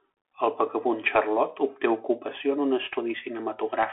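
From start to finish the speech passes through a Bluetooth CVSD headset codec, whose one-bit slope tracking, consistent with a 64 kbps link, leaves nothing above 3.8 kHz. Unlike a clean telephone band limit, sibilants turn scratchy and a granular hiss sits beneath the voice.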